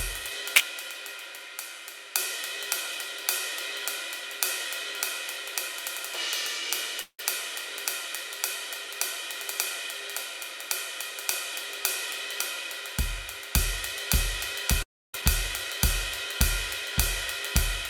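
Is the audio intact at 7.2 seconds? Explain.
No. From 7.01 to 7.20 s the music breaks up in what sounds like a long network dropout. The likely cause is a stretch where no audio reached the receiver. To cover the gap, the receiver continues the last sound as a buzz or hiss for about 170 ms, and that fades down to silence. The music then resumes without about 180 ms of material, so the passage jumps forward instead of continuing smoothly.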